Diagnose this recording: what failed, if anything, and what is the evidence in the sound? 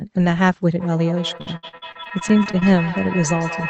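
Call processing failed: there is feedback echo between two devices from 0.76 s to the end of the speech. Each syllable returns roughly every 150 ms, up to about 10 dB below the direct speech, and each pass is thinner and more ringing. A second device in the room is replaying this speech into a microphone whose echo canceller cannot see that playback. Room reverberation would smear continuously. This echo instead arrives as distinct copies at a fixed interval, which points to an acoustic loop through another endpoint.

The network stage shows repeated packet loss (robotic sound) between 1.37 s and 2.63 s. About a dozen short holes, the longest 61 ms, are patched by stretching the preceding sound. Roughly 29% of that stretch is concealed, which gives it a choppy quality. Clean dropouts would leave silence. Here the gaps are filled with continuations of the last sound, which is the jitter buffer concealing late or lost packets. 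The call codec's high end stops near 8 kHz, as expected for the path.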